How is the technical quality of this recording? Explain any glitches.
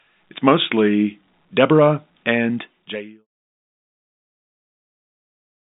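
No glitches to report here: the speech comes through without any dropouts, clicks or other faults, and the gentle fade near the end is just a normal edit.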